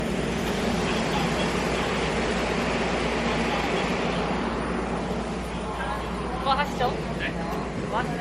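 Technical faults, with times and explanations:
Throughout: generation loss. The sound is swirly, smeared and hollow, with blurred attacks and a watery shimmer beyond what one low-bitrate pass would give. This likely comes from about seven rounds of MP3 decoding and re-encoding near 60 kbit/s, each quantising on a shifted frame grid so the errors pile up. A spectrogram shows a hard ceiling at 16.2 kHz, flickering holes and blocky patches across the bands, and smeared transient onsets.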